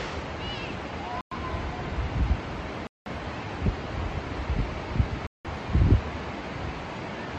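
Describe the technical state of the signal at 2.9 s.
At 2.9 s the signal is in a dropout: from 2.87 to 3.06 s the audio cuts to about 0.19 s of silence, then resumes. This is likely a Bluetooth stall, where delayed wireless packets let the headphone buffer run empty and playback paused.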